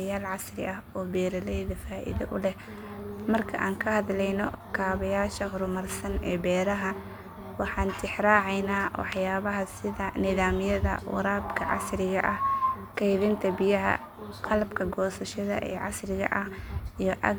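No technical faults are audible anywhere in this recording.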